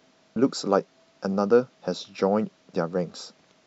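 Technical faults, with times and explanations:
0.35 s and 3.37 s, damaged data in a compressed stream: some of the encoded speech data was lost or overwritten, so the decoder could not read the frames at those points, lost its place and had to hunt for the next valid frame header before decoding normally again. Each break is heard as a brief chirp or blip, under 20 ms long.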